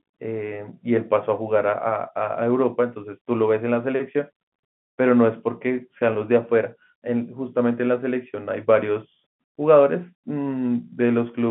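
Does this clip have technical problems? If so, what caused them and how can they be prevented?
Yes. Packet loss with pitch repetition at 6.13–6.15 s: about 20 ms went missing, which fits two 10 ms packets. The receiver filled the gap by repeating the last pitch period, so it sounds like a brief held buzz rather than a silent dropout or a click. The telephone coding's 150–3400 Hz band is heard throughout. A jitter buffer with forward error correction, or a more reliable network path, would prevent the loss.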